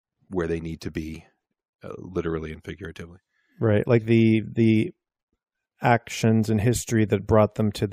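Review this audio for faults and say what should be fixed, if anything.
No faults are audible; nothing here needs fixing.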